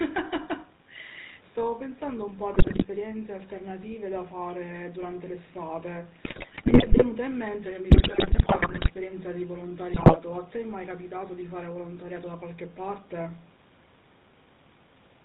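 Throughout, the speech passes through the GSM full-rate codec, which models the vocal tract and drives it with a sparse, regularly spaced pulse excitation while discarding everything above 4 kHz. The result is a muffled, band-limited sound with a plainly audible buzzy, gravelly roughness, consistent with a 13 kbps coder.

GSM bit errors then corrupt the decoder's filter, pitch and gain values at 2.54 to 2.86 s, 6.24 to 7.04 s, 7.90 to 8.91 s and 9.92 to 10.18 s. Frames decode with warped spectra and sudden level jumps, so the speech breaks into squawks, pops and gargling, most prolonged in the third burst.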